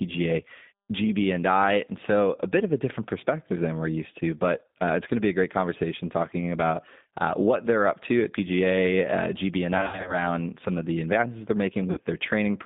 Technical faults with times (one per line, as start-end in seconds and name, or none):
0.00-12.66 G.729 codec
9.77-10.23 VoIP packet loss concealed by the speech codec
11.91-11.99 VoIP packet loss concealed by the speech codec